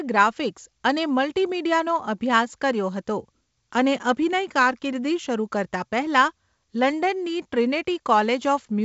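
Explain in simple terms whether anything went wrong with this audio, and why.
Nothing went wrong with this speech recording.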